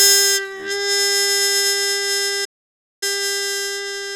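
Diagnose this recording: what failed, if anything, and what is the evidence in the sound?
A playback stall at the playback stage: from 2.44 s to 3.03 s the sound stops dead for about 0.57 s, then resumes. The likely cause is the player running out of buffered data or having its thread blocked. A lost network packet would leave a gap of only tens of milliseconds.

Time-compressed catch-up, also at playback, runs from 3.03 s to the end. The audio hurries along at 1.25 times normal speed as the player trims its backlog by cutting out and cross-fading small pieces. The pitch stays normal, which rules out a plain speed or sample-rate error.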